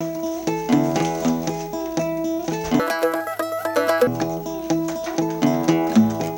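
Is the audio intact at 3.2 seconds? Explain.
No. From 2.80 to 4.07 s the audio is read two samples at a time, so it plays at double speed and an octave higher. On a spectrogram, energy shifts upward.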